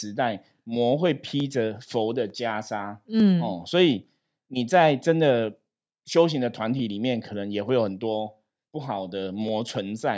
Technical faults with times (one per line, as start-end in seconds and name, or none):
0.51-9.48 clock drift buffer slips